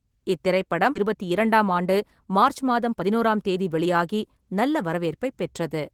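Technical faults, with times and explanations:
0.95–0.97 s, skip ahead: playback jumps forward with no gap and no fill, joining two points in the speech almost directly. Roughly a second of audio never plays. A stretch was discarded, lost in transit or dropped when the jitter buffer overflowed, while later audio was already queued, so the output cut straight to it. The delay shrinks by about the same second, which is why the jump is abrupt rather than silent.
1.05–4.38 s, jitter buffer speed-up: the speech runs at about 109% of normal speed while keeping its pitch, so it sounds hurried. The buffer was holding more audio than its target, and the receiver trimmed it by removing many short segments of one or a few pitch periods in succession. Over this span roughly a third of a second is taken out, pulling the latency back down.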